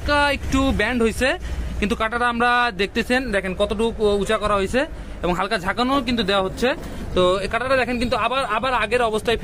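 No technical faults can be heard anywhere in this audio. There is nothing to mark at any point in the timeline.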